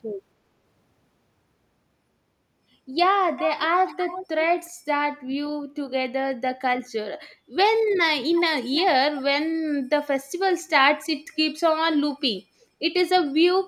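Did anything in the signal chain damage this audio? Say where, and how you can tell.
Yes. The damage is an echo leak at the call-processing stage. A delayed copy of the speech comes back at 3.36–3.62, 3.87–4.27, 4.66–4.70, 7.31–7.35, 8.32–8.40, 8.75–8.82 and 12.61–12.66 s. It lags by about 361 ms early on and 338 ms from 8.3 s. The strongest scraps are roughly 10 dB below the speech, the weakest near 40 dB down. On a spectrogram these look like faint repeats of earlier harmonic patterns, shifted right in time. The likely cause is a far-end loudspeaker whose echo canceller let residual pickup through.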